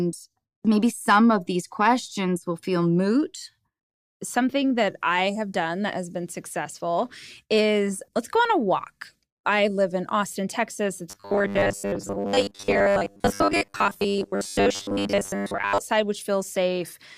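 Speech, with robotic sound from repeated short buffers between 11.10 s and 15.78 s. Across that stretch the voice becomes a rigid, metallic buzz locked at 100 Hz that still roughly tracks the syllables. The likely cause is audio arriving too slowly, with playback looping the last fragment, about 10 ms long, to fill the gaps. That repetition period fixes the buzz pitch. Most of the passage, roughly seven tenths, is repeated material rather than new audio.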